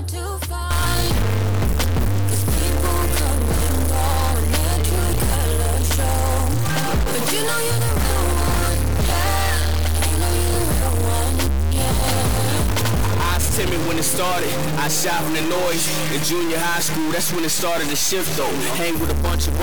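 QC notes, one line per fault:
0.71 to 19.62 s, stuck bit: harsh, buzzy distortion from here to the end, with quiet stretches filling with loud noise instead of silence. The likely cause is one data bit held fixed, throwing about half the samples off by a step of roughly -20 dBFS.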